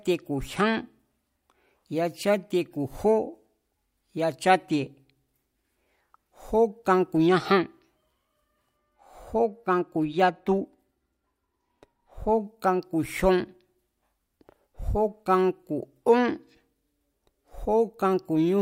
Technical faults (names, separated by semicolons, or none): de-emphasis applied wrongly